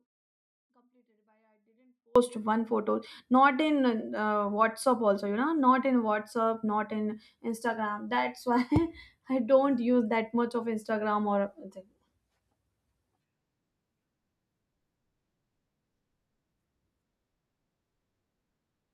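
Audio dropout to a faint residue from 0.0 to 2.16 s, already under way at the start. The speech likely lost its feed while the path stayed live, so only a faint sound about 40 dB below normal level remains until the sound abruptly returns at "one photo not in".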